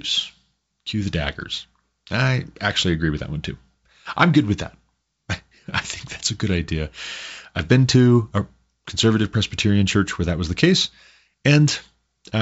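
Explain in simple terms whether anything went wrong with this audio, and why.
Nothing went wrong here; no faults can be heard.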